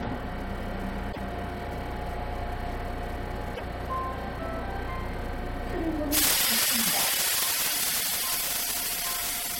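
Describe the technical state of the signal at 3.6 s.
From 3.54 to 3.61 s the audio skips ahead with a 70 ms glitch, likely a broken MP3 bit reservoir: frames after a cut borrowed reservoir bytes from missing data.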